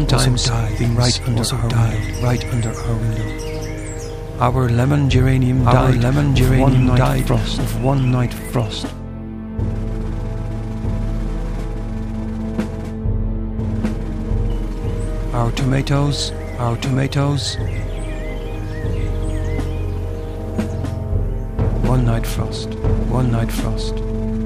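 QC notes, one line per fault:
Throughout, doubled audio track: a second full-band copy of the whole clip runs about one and a half seconds behind the first, at roughly the same level, so every sound returns as a clean repeat with no decay or room colour. Two identical layers this far out of step most likely come from the signal being captured twice, once through a slower path, or from an edit that left two offset copies in the mix.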